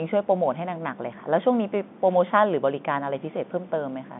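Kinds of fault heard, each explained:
No faults can be heard in this speech, which carries the narrow band of G.711 telephone coding, running from about 150 Hz to 3.6 kHz with nothing above 3.8 kHz, as expected of an A-law phone line.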